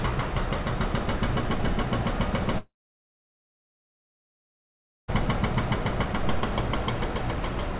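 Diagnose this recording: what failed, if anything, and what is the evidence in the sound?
Network stage: at 2.58 s the audio stops and a gap runs until 5.10 s, about 2.5 s in total. The last sound is carried on briefly as a fading buzz, and after roughly a tenth of a second only silence or a low steady floor remains for about 2.4 s. The audio then resumes without the lost section. This points to a long network dropout: packets likely stopped arriving, so the receiver's concealment extended the final sound, faded it out, and muted until the stream returned. The band stops at 4 kHz throughout, which fits a narrowband G.711 call path.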